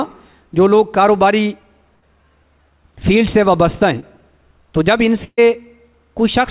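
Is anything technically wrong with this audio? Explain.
Yes. There are two bursts of packet loss and one short concealed packet loss. All of the audio is band-limited, with nothing above 4 kHz, which fits a narrowband telephone codec.

The bursts of packet loss run from 1.96 to 2.04 s and from 5.24 to 5.40 s. Packets in a row were lost or arrived too late to play. The receiver stretched the last sound and faded it. The first fill lasts about 60 ms. The second lasts about 130 ms and ends in about 50 ms of silence. Each sounds like a held buzz or fading hiss, and then the audio resumes further on.

The short concealed packet loss runs from 4.00 to 4.04 s. About 20 ms never reached the decoder in time. The receiver extrapolated from the preceding sound and blended back in. It is heard as a brief smear or wobble.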